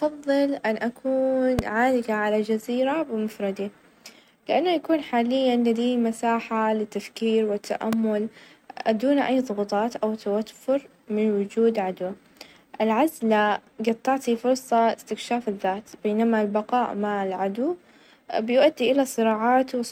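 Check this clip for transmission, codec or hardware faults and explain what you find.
Two hardware-type faults stand out in this speech clip, both the same kind.

Loud pop, at 1.59–1.61 s and again at 7.93–7.95 s: a sudden voltage pulse, likely from a switch, plug contact or static discharge, enters the chain and is shaped by downstream circuitry. Each is a single sharp pop about 15 dB above the speech, which continues uninterrupted underneath.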